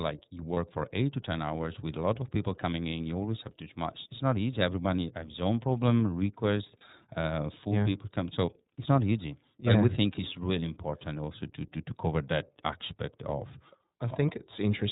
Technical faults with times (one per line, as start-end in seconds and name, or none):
0.00-14.92 iLBC codec
0.53-0.57 lost iLBC frames
6.78-6.82 lost iLBC frames